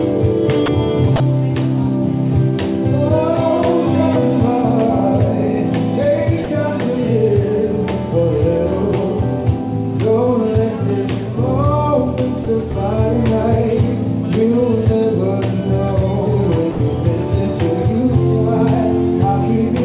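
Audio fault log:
0.66–0.68 s, 1.16–1.20 s, 6.44–6.48 s, 12.44–12.46 s, 16.72–16.80 s: sound dropped by the voice detector. The sound briefly gives way to steady comfort noise for 20 to 80 ms, then returns. The likely cause is the sender's detector mistaking quiet sound for background and pausing transmission.
12.72–12.76 s: short concealed packet loss. About 20 ms of audio arrived too late to decode. The receiver extended the preceding sound to bridge the gap, then blended back. The result is a brief smear or wobble; the G.711 call path leaves no content above 4 kHz throughout.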